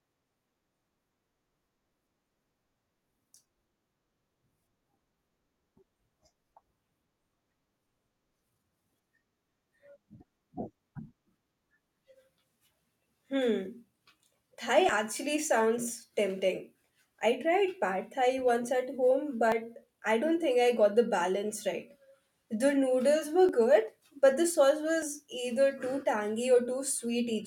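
Sudden forward skips in the speech occur at 14.89, 15.94, 16.90, 19.52, 23.49, 25.02 and 26.03 s, each losing around 20 ms, about double at 25.02 s. The likely cause is a dropped buffer (overrun): unread samples were overwritten and the surrounding audio spliced together.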